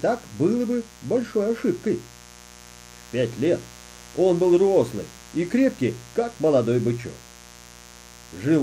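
From start to finish the speech carries a mains buzz based on 60 Hz. Sharp spikes from switching hardware, such as a dimmer or rectifier, or from an unshielded run, are getting into the signal path twice per mains cycle. This gives a dense stack of 60 Hz harmonics reaching into the kilohertz range. It sits around 25 dB below the speech and is heard as a steady, raspy buzz underneath it, present even in the pauses.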